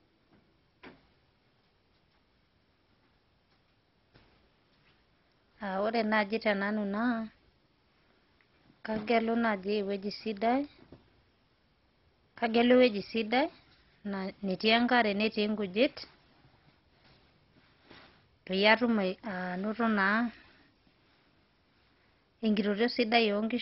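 Speech that sounds dull and gurgling throughout, with nothing above about 5.6 kHz and granular, flickering distortion, likely MP2 compression at a very low bitrate, around 32 kbps.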